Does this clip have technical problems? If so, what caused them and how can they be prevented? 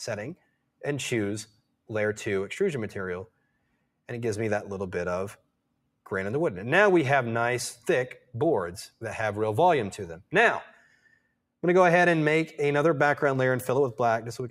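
Yes. The sound is cut by the noise suppressor at 0.37 to 0.81 s, 1.46 to 1.71 s, 3.28 to 3.89 s and 10.7 to 11.37 s, each dropping by about 18 to 19 dB. The suppressor mistakes sustained or decaying parts for noise and pulls them down, so tails shorten while onsets survive. On a waveform the envelope pinches inward; a spectrogram shows darkened patches and clipped decays. Lowering the suppression strength or using a gentler gain floor would prevent this.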